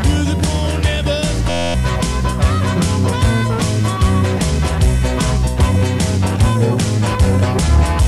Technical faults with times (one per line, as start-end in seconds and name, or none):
1.50-1.74 system hang loop